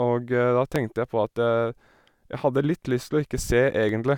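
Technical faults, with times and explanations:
0.76–3.89 s, clock drift buffer slips: about four clicks every 1.05 s in the speech, likely unsynchronised clocks forcing small sample blocks to drop or repeat.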